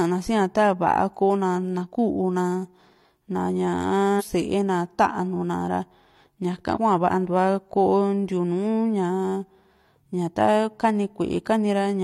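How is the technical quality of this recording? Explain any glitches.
The recording has three brief glitches, at 1.81 to 1.87 s, 4.16 to 4.23 s and 6.72 to 6.78 s. Each is a short disruption of about 60 ms breaking into the speech. They come from damaged data in the compressed stream: corrupted bytes make the decoder misread those frames and lose sync until it locks onto the next valid frame header.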